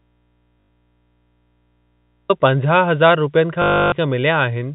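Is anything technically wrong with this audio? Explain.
Yes, there are two kinds of fault.

The audio dropout to a faint residue runs from the very start until 2.3 s, already under way when the clip begins. The wanted signal is absent and only mains hum remains, roughly 45 dB below normal level, before the sound returns abruptly at 2.3 s. The cause is likely a break in the signal feed while the downstream input stayed live, leaving its open-input hum audible.

Packet loss with last packet repeated occurs twice. The first is from 0.61 to 0.67 s, inside the dropout, covering 80 ms, which points to four 20 ms packets. The second is from 3.62 to 3.92 s, covering 300 ms, which fits fifteen such packets. The receiver kept replaying the last packet it had. The longer run buzzes at about 50 Hz like a robotic stutter.

The telephone-band G.711 coding passes nothing above 4 kHz.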